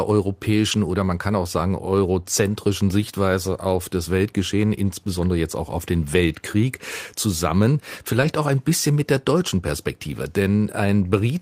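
Lost packet rebuilt from error correction at 0.71–0.73 s, 3.73–3.75 s, 4.73 s, and 8.21–8.31 s. The next packet carried a low-bitrate copy, so there's no gap, just brief rough, noisy patches. The last runs 60 ms, which fits three separate packets.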